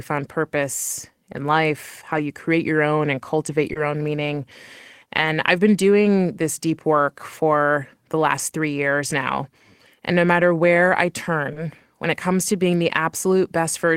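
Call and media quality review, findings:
Lost packet rebuilt from error correction, seven spots: 0.61 s, 2.09–2.19 s, 3.75–3.77 s, 5.17–5.27 s (right before "I've been doing this"), 8.37–8.39 s, 10.41–10.43 s, 11.55–11.57 s. Symptom: brief rough, grainy patches, no gaps. Component: Opus in-band FEC at the receiver. Mechanism: the next packet carried a low-bitrate copy of the lost one, and the decoder played that. Five spots are single 20 ms frames. The runs at 2.09 and 5.17 s are 60 ms each, three packets.

Short concealed packet loss, two spots. First at 3.73–3.77 s, between "your own and cultivate" and "own meaning". Second at 11.53–11.57 s, between "where I" and "when it comes to". Symptom: a quick smear or wobble. Component: jitter buffer/decoder PLC. Mechanism: 20 ms didn't arrive in time, so the decoder extended the preceding sound to cover it. The following 20 ms came back via the FEC copy, so each spot is a concealed frame plus a rough rebuilt one.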